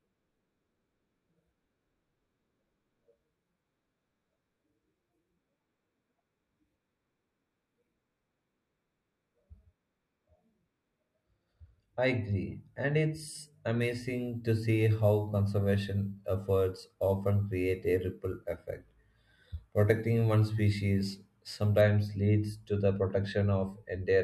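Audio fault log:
13.81–21.81 s crude rate conversion: nearest-sample conversion, which fits 32 kHz to 44.1 kHz, adds inharmonic fizz roughly 30 dB down, visible as spurious spectrogram lines tracking loud speech.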